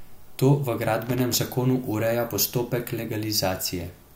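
From 1.06 to 1.35 s, loose connector crackle cuts in. A dirty contact makes and breaks, chopping the speech into scratchy bursts. It stops before "zakonu ureja postopek".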